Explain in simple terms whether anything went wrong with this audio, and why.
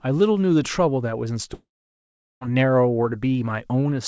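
From 1.54 s to 2.43 s the sound stops: a brief fading buzz carries on the last sound, then about three quarters of a second of silence. This is likely a long network dropout, with the missing audio never recovered when the sound resumes.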